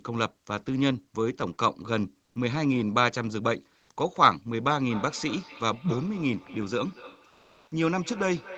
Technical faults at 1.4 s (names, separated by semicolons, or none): none